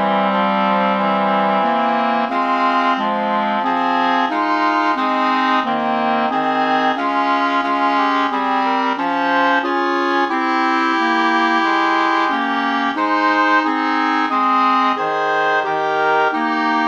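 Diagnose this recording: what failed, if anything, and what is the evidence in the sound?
Nothing failed; no faults detected.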